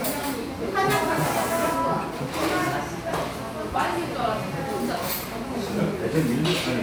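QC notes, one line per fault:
No faults heard in playback.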